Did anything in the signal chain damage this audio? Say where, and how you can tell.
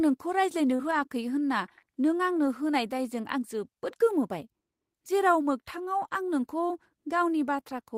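Yes. At 0.75 to 0.81 s the speech briefly smears and wobbles. This is short concealed packet loss on the network path. About 40 ms never arrived in time, so the decoder extrapolated roughly 35 ms from the preceding sound and then blended back into real audio.

Overlapping this, from 0.79 to 1.01 s the speech turns rougher and noisier without any gap. This is a lost packet rebuilt from error correction. The decoder played low-bitrate copies carried in following packets, and the 120 ms rebuilt points to about six 20 ms packets.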